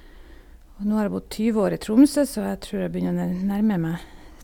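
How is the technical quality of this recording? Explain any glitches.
The recording shows no technical glitches; the speech signal stays continuous and intact throughout.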